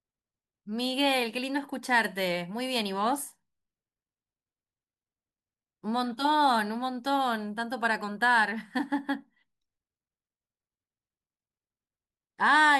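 No technical faults can be heard anywhere in the recording.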